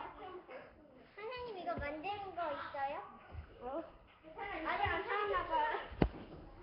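Throughout the clip the sound carries a rough, hissy halo and a smeared, watery texture, with nothing above 5.3 kHz. This is likely Nellymoser compression: fixed-rate block coding that starves weak bands and fills them with noise, consistent with a rate near 22 kbps.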